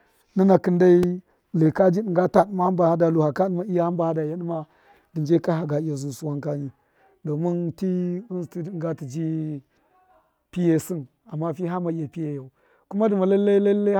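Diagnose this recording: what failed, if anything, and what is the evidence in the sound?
Repeated buffer at the driver stage: clicks at 1.03 s and 10.81 s, where a 2.7 ms slice replays when new audio arrives late, fitting a 128-sample buffer.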